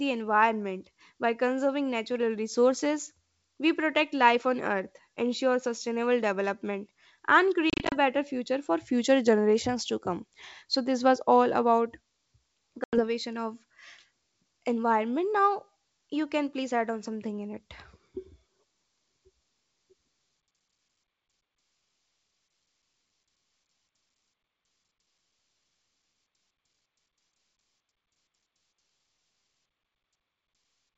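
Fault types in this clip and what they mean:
Packet loss on an ADPCM call: packets of the G.722 wideband stream went missing and were replaced by silence, leaving the decoder's adaptive predictor and step size out of step with the sender's until they caught up. Around 7.7 to 8.0 s, about 130 ms vanishes in short holes of up to 30 ms, spread over 220 ms. Near 12.84 s, roughly 90 ms drops out. Spectrograms show abrupt full-band blank columns, and waveforms show flat gaps with hard edges.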